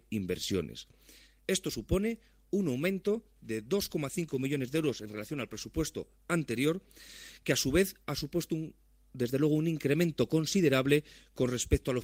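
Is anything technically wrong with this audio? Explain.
Yes, there is a call bitrate drop from 4.1 to 5.73 s. The sound turns rough and dull for about 1.6 s, which points to the encoder falling from about 32 to 17 kbps, coding coarsely and trimming high frequencies. Unlike packet loss, there are no gaps or clicks.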